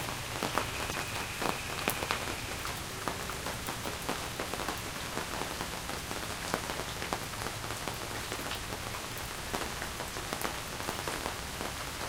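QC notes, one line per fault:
0.90–0.95 s, 3.12–3.16 s, 6.76–6.80 s, 10.65–10.69 s: damaged data in a compressed stream. Four brief disruptions of about 40 ms each break into the sound as a quick garbled burst or dropout. Corrupted bytes made the decoder misread those frames, lose sync and hunt for the next valid frame header.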